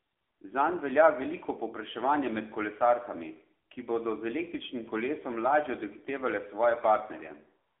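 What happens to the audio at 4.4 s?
At 4.4 s the speech sounds thin, buzzy and synthetic, with nothing above about 3.6 kHz, as it does throughout the clip. This is the AMR narrowband mobile codec: the voice is confined to a 300 Hz to 3.5 kHz phone band and rebuilt from a sparse vocal-tract model, which fits a low AMR-NB mode around 7.4 kbps.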